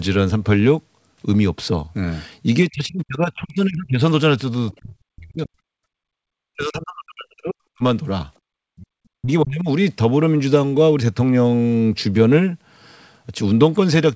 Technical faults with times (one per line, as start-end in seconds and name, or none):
2.70-4.00 speech suppressed in double talk
4.72-4.77 other side's voice leaking through
4.78-5.53 speech suppressed in double talk
5.81-6.01 background gated by the echo canceller
6.29-7.83 speech suppressed in double talk
8.52-8.88 speech suppressed in double talk
9.17-9.68 speech suppressed in double talk